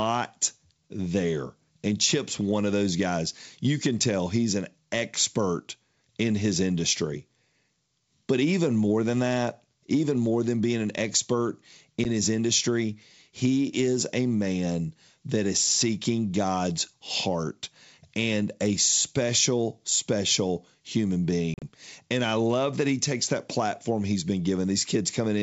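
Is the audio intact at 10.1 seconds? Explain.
Yes, the audio is intact at 10.1 seconds, where the speech passes through G.722 wideband telephone coding at 64 kbit/s with nothing breaking or interrupting it.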